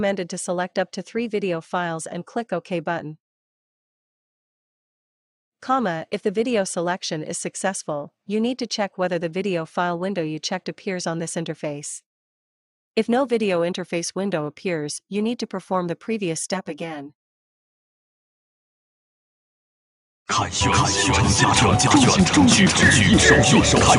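From 16.5 s to 21.4 s the sound turns hollow and phasey, thin in body. This is channel delay (comb filtering): one channel arrives about 10 ms late, and summing to mono cancels fixed notches starting near 50 Hz and repeating at even spacing.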